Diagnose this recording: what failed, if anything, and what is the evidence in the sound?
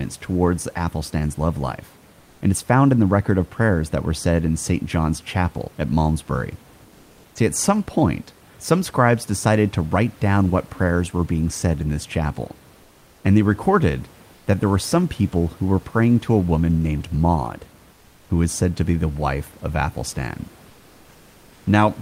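Comfort noise replaces the background in four pauses: 12.83–13.23 s after "said in this chapel", then 14.35–14.47 s, 17.95–18.27 s and 20.71–21.63 s. The room tone turns steady and featureless, about 2 to 3 dB quieter. This is likely codec discontinuous transmission, consistent with Opus DTX, halting between phrases.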